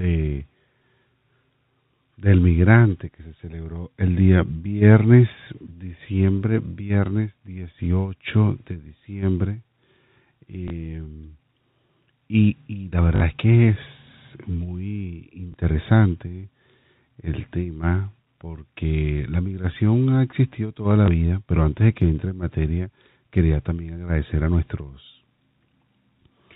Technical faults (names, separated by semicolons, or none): packet loss with last packet repeated